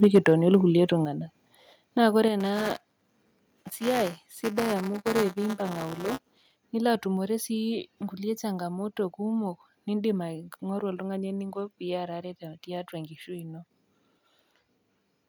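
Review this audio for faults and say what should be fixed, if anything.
Microphone overload, 0.03 to 0.56 s: harsh crackle on the loudest speech peaks, likely from input gain about 4 dB too hot, squaring off a few percent of samples, visible as flat-topped waveform peaks and vertical broadband streaks on a spectrogram. Set the microphone gain lower so peaks stay below full scale.

Microphone volume stepped down at 0.04, 1.05 and 2.28 s: the whole signal drops suddenly by about 4, 6 and 5 dB, likely the call software cutting input volume, seen as abrupt waveform envelope steps. Disable automatic input-gain control once the level is set correctly.

Buffer tearing, 2.4 to 6.56 s: a robotic 200 Hz buzz under the speech, because a small portion of each buffer replays audio about 10 ms old, showing as hard waveform discontinuities every 5 ms and 200 Hz harmonic striping on a spectrogram. Keep the writer and hardware read pointers properly synchronised, with adequate buffer headroom.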